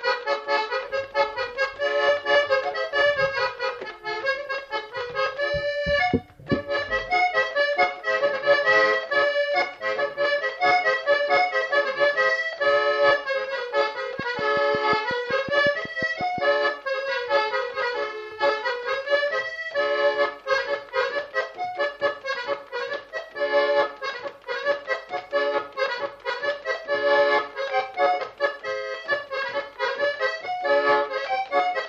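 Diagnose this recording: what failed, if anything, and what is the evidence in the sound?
A train of clicks runs from 14.19 s to 16.39 s: about fifteen near-identical pulses at a steady 5.5 per second, peaking around 5 dB above the programme level, so they tick clearly over the audio and through any quieter moments. The fixed spacing and uniform shape point to a repeating external pulse rather than damage to the material itself, most likely interference coupling into the analogue wiring from nearby equipment or a faulty connection or power supply for those two seconds.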